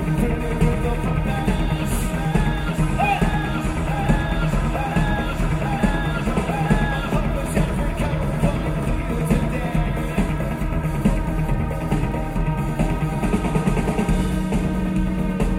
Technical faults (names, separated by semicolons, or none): none